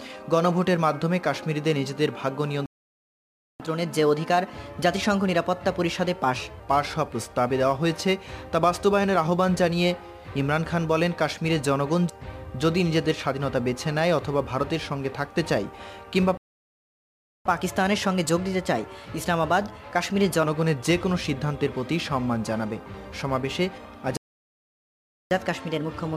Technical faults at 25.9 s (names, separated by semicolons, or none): catch-up at higher speed